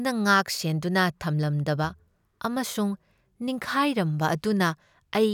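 Listening through this speech recording, nothing stood out as a technical problem.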